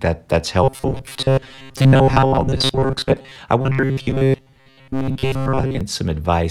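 From 0.64 to 3.36 s, and again from 3.61 to 5.81 s, the speech takes on a robotic sound from repeated short buffers. A hard, metallic buzz at 134 Hz sits over the voice. The words stay roughly traceable. The likely cause is audio arriving too slowly, so a fragment of about 7.5 ms is replayed over and over. Most of the real audio is skipped and replaced by these repeats.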